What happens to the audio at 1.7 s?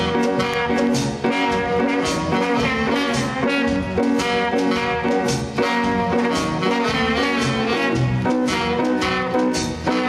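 At 1.7 s the audio shows gain pumping, present throughout: the background swells between loud sounds and ducks by roughly 5 dB under each, likely from excessive gain feeding a fast limiter. The waveform envelope looks flattened, with noise floor bands rising and dipping on a spectrogram.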